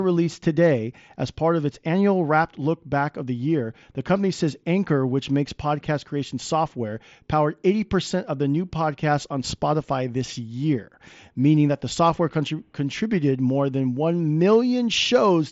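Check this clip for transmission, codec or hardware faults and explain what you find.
No faults found in this clip.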